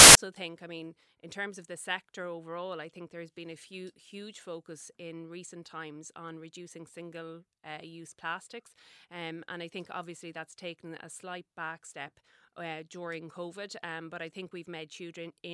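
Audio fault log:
0.00–0.15 s, file tags played as audio: the clip opens with a sharp burst of very loud white noise, hard-edged at both ends, before the speech comes in at "think I mean in". That's the file's embedded cover picture being read as if it were samples. Compressed image data is essentially random bytes, so when it's played as audio it comes out as flat, very loud static rather than any recognisable sound.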